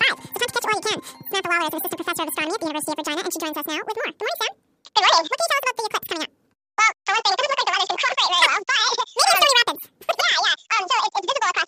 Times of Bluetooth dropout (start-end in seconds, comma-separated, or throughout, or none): none